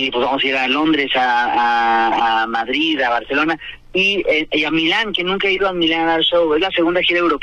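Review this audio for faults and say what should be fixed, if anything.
At 2.12 to 2.21 s there is a corrupt frame decoded: a burst of about 90 ms that chirps and hisses at around -10 dBFS, spanning a handful of consecutive compressed frames. Flipped bits in those frames made the decoder misread gains and spectral codes, so energy lands at wrong frequencies for each damaged frame. Unlike a dropout or concealed packet loss, which leaves a gap or a smeared repeat, this adds new, unrelated sound. Protecting the stream with checksums and discarding or concealing frames that fail them would prevent it.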